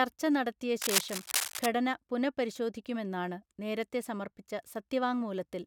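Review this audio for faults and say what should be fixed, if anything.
Cable scratch noise runs from 0.82 to 1.66 s, ending just before "പുനഃപരിശോധിക്കുമെന്നാണ് നേരത്തെ സമർപ്പിച്ച". It is a dense, uneven scratching and rustling over the speech, roughly as loud as the speech itself. The likely cause is a worn cable, connector or control being moved. Its contact resistance then jumps around rapidly and injects bursts of noise into the signal. To prevent it, replace or reseat the faulty cable or connector and secure it so it cannot shift while recording.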